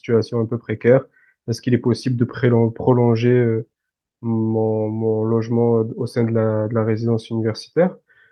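No technical faults can be heard anywhere in the recording; the signal stays continuous and stable throughout.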